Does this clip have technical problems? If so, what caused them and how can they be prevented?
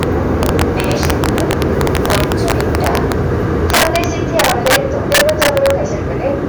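Yes. Integer overflow runs throughout: the signal is driven about 7 dB past full scale, and around one percent of samples exceed the integer limit and wrap to the opposite sign, producing sharp, violent cracks on loud peaks. Prevent it by saturating or limiting before integer conversion.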